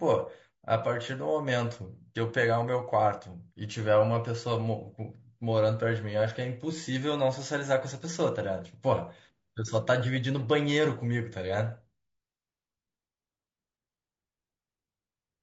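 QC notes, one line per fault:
throughout: low-delay AAC compression. The speech sounds plainly rough and grainy, with noise filling the gaps between harmonics and a thin, synthetic-sounding top band. Likely AAC-ELD at a low bitrate near 32 kbps, whose short frames resolve pitch harmonics poorly.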